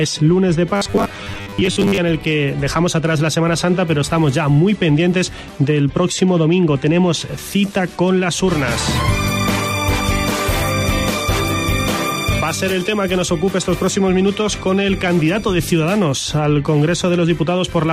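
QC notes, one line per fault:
0.76–1.98 s, robotic sound from repeated short buffers: the audio turns into a rigid, metallic buzz fixed at 100 Hz that still loosely tracks the underlying sound. The likely cause is late-arriving audio, with the playback side covering each gap by looping the most recent 10 ms slice while fresh material is dropped. Roughly half of this stretch is repeated slices, and that steady 10 ms period imposes the 100 Hz pitch.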